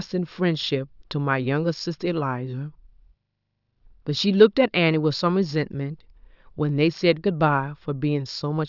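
Nothing in the speech stood out as a technical problem on listening.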